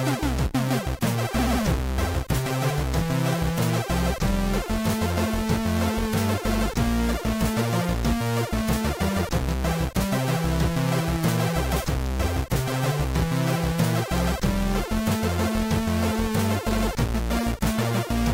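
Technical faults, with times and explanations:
No technical faults are audible anywhere in the recording; the signal stays continuous and stable from its first moment to its last.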